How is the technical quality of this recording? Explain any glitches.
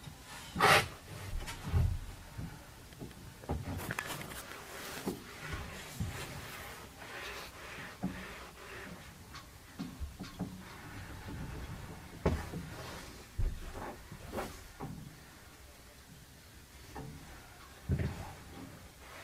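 No technical faults are audible anywhere in the recording, so there are no glitches to explain.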